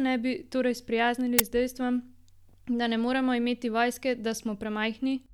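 At 1.39 s, a file tags played as audio fault: embedded cover-picture data is read as samples, giving a hard-edged burst of very loud white noise just before "s dejstvom".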